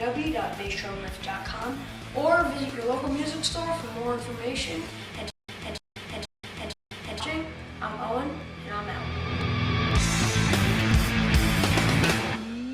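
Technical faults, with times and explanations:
5.30 to 7.20 s: stutter with silent gaps. The same short burst, about 0.29 s long, plays four times, with about 0.18 s of dead digital silence after each. The cycle repeats every 0.48 s, evenly, like a mechanical hiccup. This is likely a stalled player or stream. At each retry it replays its last fragment, then runs dry before the next attempt. The audio that belonged in this span never arrives.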